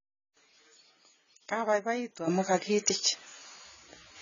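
Speech, heavily smeared and dull throughout, with the spectrogram empty above 7.1 kHz; this is likely AAC compression, consistent with AAC-LC at roughly 16 kbps. At 2.28 s a sudden gain jump lifts speech and background noise together by about 13 dB until the end, a step in the waveform envelope, likely from a gain change applied without a ramp.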